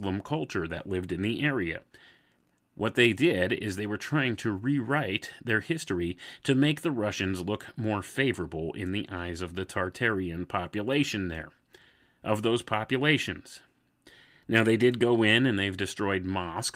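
On listening, nothing stood out as a technical fault anywhere in this speech recording.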